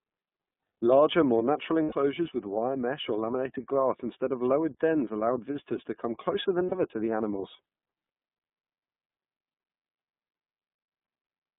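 Throughout, the speech sounds thin, boxed-in and slightly rough and synthetic, confined to roughly 150 Hz to 3.6 kHz. That is the iLBC codec at work: a narrowband VoIP coder whose damage here is plainly audible, consistent with its 13.33 kbps mode and 30 ms frames.

From 1.83 to 1.95 s, and again from 6.66 to 6.75 s, the voice briefly turns into a held, buzzy, breathy vowel. These are lost iLBC frames, about 90 ms and 60 ms of missing audio. The decoder fills each gap by repeating the last pitch cycle mixed with noise, then recovers almost at once.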